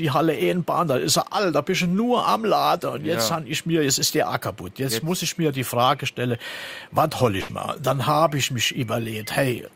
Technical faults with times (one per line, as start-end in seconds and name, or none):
7.41-7.50 burst of packet loss